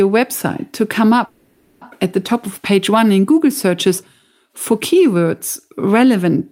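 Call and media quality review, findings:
Call audio freeze, 1.25–1.83 s, after "website to come". Last sound stretched into a fading buzz, 560 ms; resumes at "at the top of", nothing lost. Likely jitter buffer underrun from delayed packets; playout delay up 560 ms.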